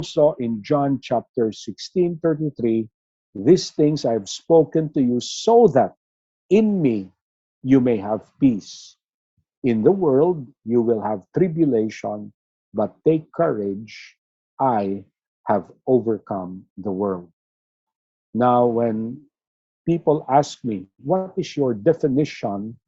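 No technical faults detected.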